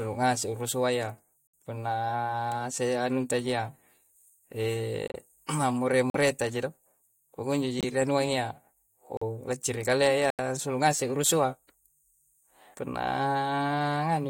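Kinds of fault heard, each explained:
Corrupt frame muted: the decoder rejected damaged compressed frames and the player filled them with silence. The speech cuts out abruptly six times between 1.48 and 10.30 s, each gap about 50 to 100 ms long, spanning a few frames, with timing intact.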